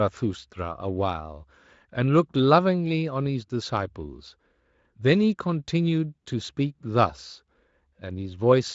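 Nothing is technically wrong with this speech clip, which is carried through a Speex codec working as it should.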